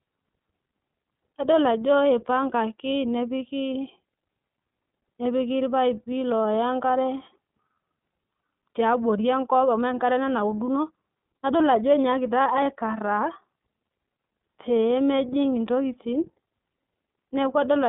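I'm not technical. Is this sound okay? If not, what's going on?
No, not quite. The whole recording has been squeezed through the iLBC codec, a compression method built for internet phone calls. It throws away everything above about 3.7 kHz and much of the deep bottom end, so the speech sounds thin and boxed-in, like an old phone line. It also rebuilds the sound in 30 ms chunks, each handled on its own, which leaves the voice clear but slightly rough and artificial all the way through.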